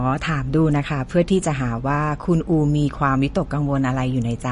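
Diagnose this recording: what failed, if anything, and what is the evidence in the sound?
The codec stage is where this went wrong, and it's likely MP3 compression. Across the whole speech clip there's nothing above 10.6 kHz, a hard treble shelf the encoder imposed to save bits, and the damage is plainly audible as a watery, swirly texture. That fits a starved bitrate around 40 kbps. The encoder zeroed weak frequency lines, and they flicker in and out frame to frame.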